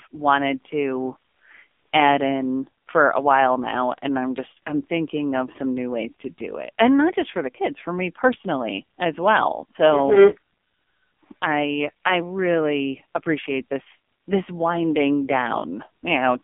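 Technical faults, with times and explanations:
Throughout, AMR narrowband mobile codec: nothing passes above 3.6 kHz, and heavy low-rate coding, consistent with the 5.9 kbps mode, makes speech buzzy and synthetic.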